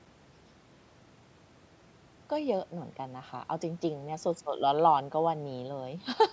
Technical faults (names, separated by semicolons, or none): none